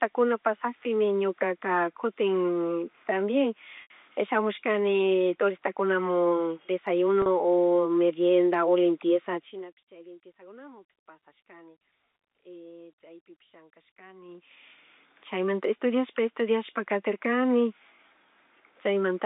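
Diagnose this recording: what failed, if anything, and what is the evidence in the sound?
Network stage: packet loss with pitch repetition at 3.82 to 3.90 s (80 ms missing, which fits about four packets) and 7.22 to 7.26 s (40 ms, about two packets). The receiver's concealment repeats the last pitch period and fades it over about 50 ms, heard as a brief held, buzzy tone in the shorter gap, while the longer gap fades into silence and the speech returns with a short cross-fade.

Gain processing stage: zipper noise from 14.21 to 14.69 s, where the level changes by around 25 dB in 2 dB steps, roughly thirty a second. The gain jumps in coarse steps without interpolation, so each step leaves a small click and the level change comes out as a rapid ticking.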